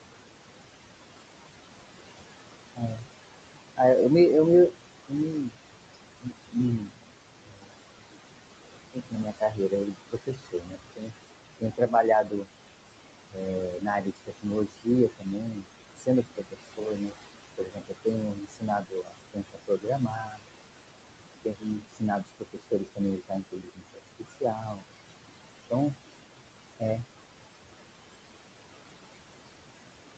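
Noise suppressor artifacts run through the whole clip. The suppressor pulls the room's steady background down by about 21 dB between phrases. The noise sinks in the gaps, then rises back under the speech.

Speech cut by the noise suppressor comes at 2.75–3.04 s, 4.7–7.71 s, 8.93–12.48 s, 13.31–20.43 s, 21.45–24.83 s and 25.7–26.0 s. The suppressor mistakes quieter speech for noise. It ducks it by about 20 to 22 dB. Consonants and endings sound swallowed, several seconds in total.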